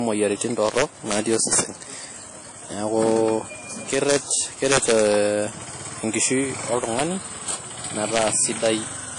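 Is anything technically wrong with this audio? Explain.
Yes. There are two faults.

Throughout the clip, the speech sounds washy and ringing, with hiss that breathes with the voice. Nothing is present above about 10.1 kHz. The damage is plainly audible. The likely cause is WMA compression at a low bitrate, which fits a 32 kbps encode.

Integer overflow occurs at 0.41–1.60 s, 3.09–3.17 s, 3.94–5.12 s, 6.23 s, 6.84–7.02 s and 8.16–8.74 s. Peaks went past the integer limit and wrapped to the opposite sign instead of being clamped. The overshoot is about 2 dB in most events, about 1 dB at 6.84 s, and barely past the limit at 3.09 s. Each wrapped peak is heard as a crack, sharper than clipping.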